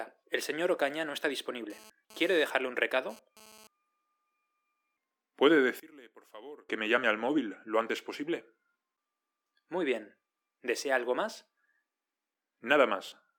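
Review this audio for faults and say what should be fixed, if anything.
From 1.70 to 3.67 s, a GSM phone buzz sits about 24 dB below the sound. A nearby phone transmitting data in 217 Hz bursts is rectified into a raspy, harmonic-rich buzz. Keep phones away from the audio chain.

From 5.80 to 6.69 s, the sound drops by about 24 dB, leaving only a faint remnant. The likely cause is one channel inverted, cancelling the shared content in the mono sum. Check channel polarity before any mono fold-down.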